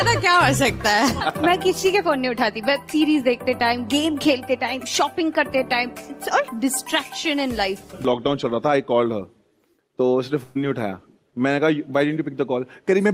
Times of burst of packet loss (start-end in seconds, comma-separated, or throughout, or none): 10.43-10.57